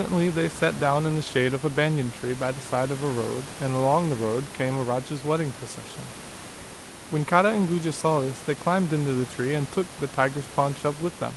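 Nothing goes wrong technically anywhere in this recording.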